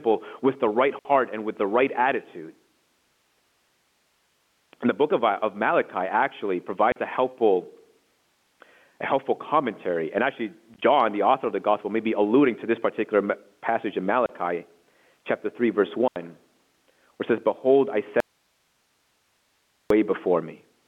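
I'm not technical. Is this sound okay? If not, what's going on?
No. The speech has short holes where it briefly goes completely silent, each cut off sharply rather than trailing away. This is packet loss filled with silence: the sound travelled in small chunks, some never arrived, and the receiving end played nothing in their place. The gaps come in steps that fit 10 ms chunks. They fall at 0.99 s (60 ms, between "with the right" and "and with the right"), 6.92 s (40 ms, just before "a helpful"), 10.74 s (40 ms in short bits spread over 0.08 s, just before "the author of the"), 14.26 s (30 ms) and 16.08 s (80 ms).

Near the end, from 18.20 s to 19.90 s, the speech vanishes abruptly for about 1.7 seconds, leaving only hiss well below normal level, then returns just as suddenly. This is an audio dropout to a faint residue. The wanted sound was lost for that stretch, but the equipment after the break kept running, so its own background hiss carried on. 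The likely cause is the signal being cut before that later stage.

The narrow, telephone-like tone throughout comes from ordinary G.711 telephone coding, not from these faults.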